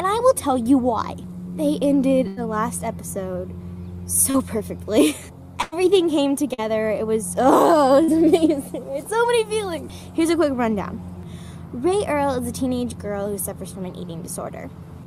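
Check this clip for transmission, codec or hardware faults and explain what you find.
Two kinds of transmission fault are present, both from lost network packets.

Burst of packet loss, from 2.27 to 2.39 s and from 5.62 to 5.74 s: the sound stretches into a held buzz or fading hiss, then jumps ahead. About 100 ms never arrived each time, and the receiver extended the last sound for roughly 90 to 100 ms while fading it.

Short concealed packet loss, at 4.31 to 4.36 s, 6.54 to 6.60 s and 8.04 to 8.10 s: a brief smear or wobble, where a short sound can drop out. Each time about 40 ms arrived too late, so the decoder filled 33 to 42 ms by continuing the previous sound before blending back.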